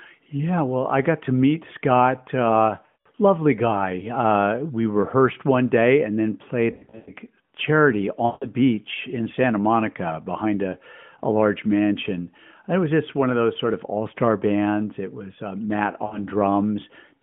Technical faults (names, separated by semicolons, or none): lost AMR speech frames